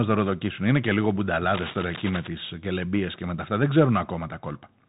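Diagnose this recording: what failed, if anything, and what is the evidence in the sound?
The codec stage is the culprit throughout: a Bluetooth CVSD headset codec, with nothing above 3.8 kHz, grainy hiss under the speech and scratchy s sounds, which fits a 64 kbit/s link.

From 1.48 to 2.28 s there's cable scratch noise: dense, uneven rustling bursts sitting only about 10 dB under the speech, likely a worn cable or connector being moved.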